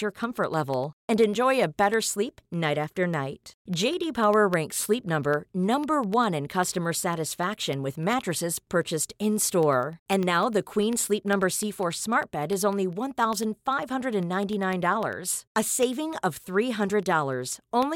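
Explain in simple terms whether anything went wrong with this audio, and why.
Something in the playback or recording chain, most likely a background task stalling the USB connection or the audio driver, interrupted the sound at a steady rhythm. These are periodic USB or driver dropouts. From 0.14 s to 17.83 s, every 0.1 s, a tiny sliver of sound, a small fraction of a millisecond, was replaced by silence. To the ear, that becomes a regular ticking, about ten clicks a second, running under the speech wherever there is sound.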